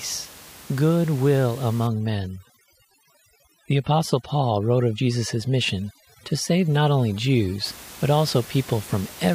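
From 1.87 to 7.66 s there's overdone noise removal: the reducer was set so hard that it pulls individual frequency bands down whenever they sit near its noise estimate. The room noise, about 21 dB under the speech, drops and breaks up into twinkling specks, and quiet parts of the voice go with it.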